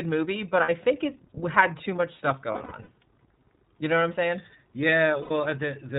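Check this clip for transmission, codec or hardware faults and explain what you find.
Two faults are audible: the whole recording passes through the iLBC codec, and three stretches suffer lost iLBC frames.

iLBC codec, throughout: the speech is band-limited, with nothing above 4 kHz, and sounds clearly rough and synthetic. Each frame's excitation is coded independently, and the coarseness fits the 13.33 kbps, 30 ms-frame mode. A spectrogram shows a hard ceiling at 4 kHz and smeared harmonics.

Lost iLBC frames, at 0.63 to 0.69 s (between "movie but" and "think it had too"), 2.52 to 2.89 s (after "had too much stuff"), and 5.22 to 5.32 s: the decoder repeats the last pitch cycle blended with noise. This produces held, buzzy vowels. The first loss totals 60 ms and the last 90 ms. The middle loss totals 240 ms, scattered across 360 ms, with the longest run about a tenth of a second. The repetition appears as flat, repeating waveform periods and frozen harmonic stripes on a spectrogram. 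The speech recovers almost immediately after each loss.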